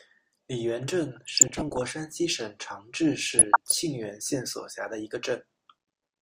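From 1.16 to 1.90 s and again from 3.35 to 3.75 s the speech bubbles and squelches, with chirpy flurries riding over it. This is DAB burbling. Weak reception let a bit error rate somewhat under one percent slip past error correction, so corrupted samples put short blips of noise in single sub-bands and corrupted scale factors make individual sub-bands leap in level for up to a frame, across dozens of frames in the first burst.

From 4.77 s to the end at 6.22 s a fine hiss and roughness clings to the louder, brighter parts of the speech and drops away in the gaps. That points to sample clock jitter of around a microsecond. The converter sampled slightly early or late at random, leaving an error about 45 dB below the signal that grows with the waveform's slope.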